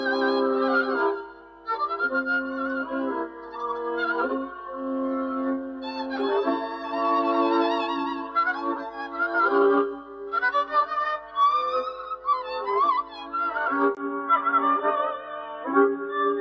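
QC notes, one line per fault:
Throughout: noise suppressor applied to music or sounds. A suppressor tuned for speech stays active on this audio. It treats steady tones and decaying tails as noise and pulls them down, so the level swings by about 10 dB. The sound pumps and thins while attacks pass through.
1.16–1.68 s, 3.27–3.57 s, 4.49–4.75 s, 5.7–5.88 s, 8.24–13.33 s, 15.18–16.08 s: sound cut by the noise suppressor. Held and fading parts sink while sharp onsets survive. The deepest dips are about 10, 7, 5, 4, 9 and 8 dB. The longest run is patchy across five seconds.
13.95 s to end: input switched to a poorer device. A 20 ms gap is followed by duller, boxier sound. Nothing above 8 kHz passes the call microphone processing. The level shifts by around 5 dB, and a faint new noise floor appears roughly 45 dB down. This is likely a change to a narrower-band microphone or headset profile.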